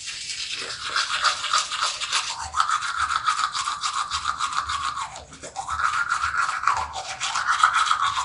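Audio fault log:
Throughout, Nellymoser compression: a rough, hissy halo and a smeared, underwater quality sit on the sound, and nothing is heard above 10.6 kHz. The likely cause is the Nellymoser Asao codec, at a data rate that fits about 44 kbps. It codes short blocks with a fixed, small bit budget, so weaker bands get no bits and are filled with synthetic noise, and block-to-block coding blurs the sound in time.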